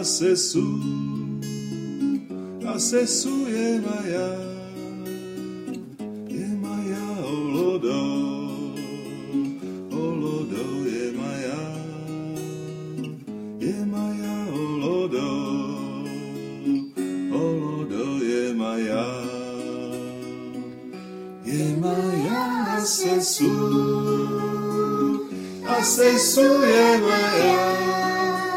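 No technical faults are audible.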